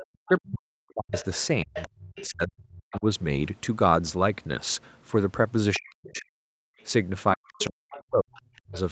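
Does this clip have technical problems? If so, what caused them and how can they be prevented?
Yes. From 0.0 to 3.0 s and 5.74 to 8.8 s, a second, separate voice runs under the speech, about 10 dB and then about 20 dB lower. This is other side's voice leaking through, likely from loudspeaker echo the canceller missed. Unlike room reverberation, it is different speech rather than a smeared copy of the talker. Using a headset, or lowering the speaker volume, prevents it.

From 0.01 to 3.04 s and 5.78 to 8.77 s, the speech dips by as much as about 40 dB, for roughly two seconds in each stretch. This is speech suppressed in double talk, likely because the echo canceller turned down both voices while they overlapped. Unlike network dropouts, the dips occur only while the other voice is present. A canceller with better double-talk detection, or a headset, prevents it.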